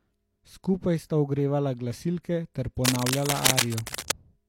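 A speech recording with two faults. From 2.85 s to 4.13 s, dense, uneven bursts of scratching and rustling noise sit over the speech at roughly the same level as the speech itself. This is cable scratch noise, most likely from a worn cable, connector or control carrying a DC voltage being moved. As it shifts, its contact resistance jumps about rapidly, and those fluctuations turn straight into crackling noise in the signal. Inside that stretch, from 3.95 s to 3.98 s, a short hiss runs ahead of a sharp attack, and the onset sounds smeared rather than crisp. This is pre-echo, spread over about 33 ms. A transform codec spreads its quantisation noise across a whole block, so when a loud transient lands late in the block, noise sized for that loud moment also fills the quieter span just before it.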